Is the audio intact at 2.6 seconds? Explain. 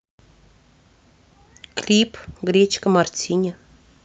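No, 2.6 seconds falls inside a jitter buffer speed-up that runs from about 2.44 to 3.47 s. The receiver had more audio queued than it wanted, so it trimmed out short pitch-period-sized chunks again and again, around 70 ms in total, to catch up. The speech there plays about 6% fast while keeping its normal pitch, so that stretch comes across as slightly rushed.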